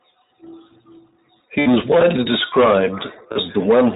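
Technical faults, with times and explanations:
Throughout, iLBC codec: the speech has clearly been through iLBC, probably at about 15.2 kbps in 20 ms frames. Everything above 4 kHz is gone, so it's narrowband and dull, and the codec damage is plainly audible as a rough, slightly synthetic edge on the voice.
1.60 to 1.68 s, lost iLBC frames: about 60 ms went missing, which fits three 20 ms frames. The decoder papered over it by repeating the last pitch cycle with some noise mixed in, so you hear a brief held, buzzy vowel before things snap back.
3.32 to 3.38 s, lost iLBC frames: same story, shorter, around 40 ms, which matches two frames. There's another short buzzy, sustained patch where the concealment repeats the last cycle, and the speech recovers almost at once because each iLBC frame decodes on its own.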